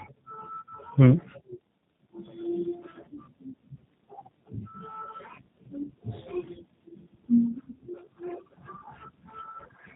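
Throughout, the speech carries G.729 codec damage, and it is plainly audible. The band stops at 4 kHz. The voice is rebuilt from a vocal tract filter, a pitch predictor and a few pulses per frame. The result sounds rough and faintly synthetic, which fits an 8 kbit/s G.729A stream.

From 6.89 to 6.93 s there is VoIP packet loss concealed by the speech codec. About 10 ms of audio went missing, which fits one lost frame. The decoder filled the gap from its last pitch and filter at falling gain. This gives a brief stretched, fading sound, and the voice stays weak or distorted until about 6.93 s.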